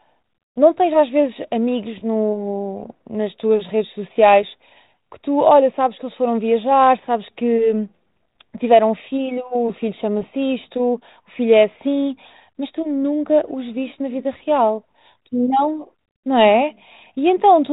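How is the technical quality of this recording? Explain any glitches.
The speech carries no glitches, only the narrow telephone band and faint quantisation hiss of light G.726 ADPCM coding at 32 kbit/s, with nothing above 4 kHz.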